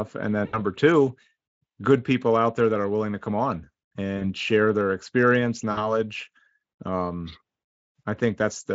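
At 0.45–0.61 s, 4.17–4.30 s (between "willing to come on" and "share their experience"), and 5.71–5.92 s (after "share their experience"), VoIP packet loss concealed by the speech codec stretches the last sound into a fading buzz. Gaps of 80, 40 and 60 ms show as smeared, flattened harmonics with a decaying waveform envelope.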